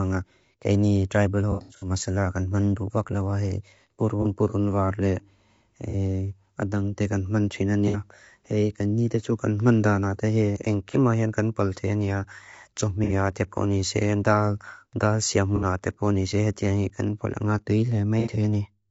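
Throughout, the speech sounds rough and grainy, with noise filling the gaps between harmonics, likely from low-delay AAC compression at a bitrate around 32 kbps. AAC frame loss with concealment leaves smeared, phasey patches where the decoder fills missing frames from earlier spectrum. The first, at 1.52 s, scatters about 210 ms of loss over 300 ms. Shorter patches of 30 to 60 ms follow at 4.22, 5.90, 7.88, 10.91, 13.04, 15.56 and 18.20 s.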